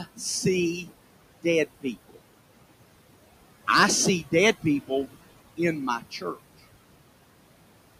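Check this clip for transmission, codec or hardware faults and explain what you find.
A noise suppressor is at work here, and it's causing two problems. It's pumping throughout, and in a few spots it's eating into the speech itself.

Noise suppressor artifacts run the whole length of the clip. The suppressor judges, frame by frame, which frequency bands hold steady background and pulls them down by about 21 dB. The room noise sits about 14 dB under the speech, so it gets ducked hard in the gaps and then swells back under each phrase.

Speech cut by the noise suppressor happens four times: 0.0 to 0.21 s, 0.81 to 0.93 s, 1.66 to 2.18 s, and 5.99 to 6.38 s, right after "in my". Each time the suppressor mistook quiet speech for noise and turned it down along with the background, by about 20 dB at worst and about 13 to 15 dB in the milder cases. Each cut lasts somewhere around a tenth to a fifth of a second, and those bits sound swallowed or oddly faint.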